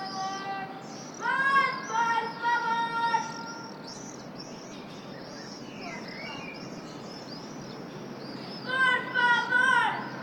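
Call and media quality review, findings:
Sound turns rough and muffled, top end gone, 3.89 s to 8.77 s, worst for about 3.1 s. Call bitrate drop: bandwidth estimate fell, encoder starved, consistent with Opus going from roughly 64 kbps down to 16 kbps, coarse coding plus high-frequency cutoff until recovery.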